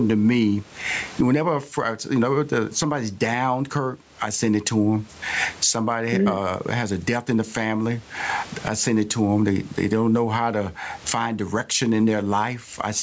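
Speech runs throughout with gain pumping, likely from input gain set far too high and a fast limiter clamping each loud sound, so the gain swings by roughly 25 dB. On a waveform, the flattened, squashed envelope shows this, with room noise, normally about 41 dB below speech; a spectrogram shows the call processing's band ending at 8 kHz.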